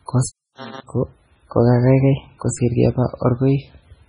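Right through the speech there's heavy codec damage with nothing above 10.4 kHz, a watery, swirly quality and smeared attacks. That's likely MP3 compression starved of bits, fitting a bitrate around 16 kbps, so the encoder chops the treble and keeps dropping weak frequency lines.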